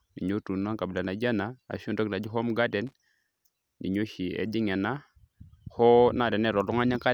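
At 2.87 s a short burst of loose connector crackle cuts into the speech, lasting about 60 ms until 2.93 s. A worn or dirty contact somewhere in the signal chain is shifting and rapidly opening and closing, so the audio is chopped into fragments for that instant. It comes across as a brief, irregular scratchy crackle sitting over the speech rather than a clean click.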